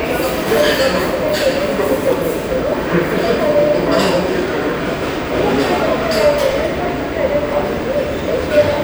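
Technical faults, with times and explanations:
4.48–8.54 s, periodic USB or driver dropouts: a regular tick or small pop about every 1.01 s, around five in all, heard only where sound is present. Each is a brief gap of around 10 ms where audio was skipped, likely from a background task repeatedly stalling the USB bus or audio driver.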